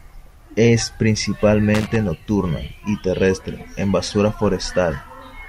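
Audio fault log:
1.75–1.96 s, loose connector crackle: a short, irregular burst of scratchy crackle just before "nocturna y terrestre en". It sounds like a worn or dirty contact flickering open and shut, so the signal gets chopped up in rapid bits, and any DC sitting on the line turns those breaks into little pops.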